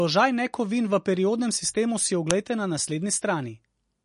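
From the start, the speech has a watery, swirling texture: sibilants turn metallic and chirpy, consonant onsets smear, and nothing is heard above about 10.5 kHz. This is MP3 compression, and the damage plainly points to a low bitrate, likely around 40 kbps. Short of bits, the encoder has cut the treble at a fixed frequency and dropped weak frequency lines that flicker in and out between frames, which produces the swirl.

At 2.31 s, right after "v periodnem sistemu si", a loud, harsh click of digital noise about 1.33 ms long breaks through. This is an uninitialised buffer: a block was played before any audio had been written into it, so leftover memory was heard as samples. The length fits a 64-sample block, and it is the garbage values, not the speech, that make the burst so loud and abrupt.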